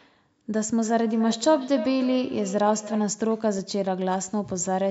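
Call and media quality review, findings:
Feedback echo between two devices, 0.81–3.28 s: repeats roughly every 300 ms, about 12 dB below speech; nearby device's playback re-captured, missed by echo canceller.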